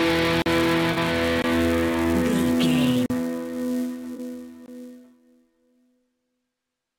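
A steady buzz runs under the whole clip. It sits at about 345 Hz and rises and falls with the level of the sound. This is a filter restarted on every block. The filter loses its memory at each block boundary and starts again from zero. Each restart leaves a tiny transient. The repeat rate fits a 128-sample block, so the ticks merge into a pitched buzz rather than separate clicks.

At 0.42 s the sound drops out completely for 40 ms, then returns at 0.46 s. This is a block of digital silence. That stretch is silent, likely because the output buffer was not filled in time. The cut in and out has no fade, leaving a short hole.

From 0.92 s to 0.98 s there is a brief smeared, noisy patch lasting about 43 ms. This is AAC frame loss with concealment. The length points to about two lost frames. The decoder covers the gap by rebuilding sound from the last good spectrum, with its detail scrambled. 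The result is phasey and blurred rather than silent.

At 1.42 s a shorter block of digital silence lasts 20 ms.

At 3.06 s another 40 ms block of digital silence cuts the sound until 3.10 s.

From 4.14 s to 4.19 s a second AAC frame loss with concealment gives the same smeared, noisy texture for about 43 ms.

At 4.66 s a final 20 ms block of digital silence leaves one more short gap.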